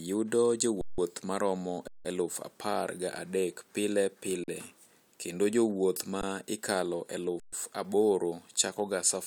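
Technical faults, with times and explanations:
0.81–0.98 s, 1.88–2.05 s, 4.44–4.48 s, 6.21 s and 7.40–7.53 s: underrun with held sample. The speech stops abruptly for about 171, 171, 43, 16 and 128 ms. The output buffer ran dry, so the converter held its last value. The waveform sits flat, so the silence starts with almost no click. Little or no audio is lost, and speech resumes where it paused, with only a soft edge. The two longer gaps fit an 8192-sample buffer, and the 43 ms gap fits 2048 samples.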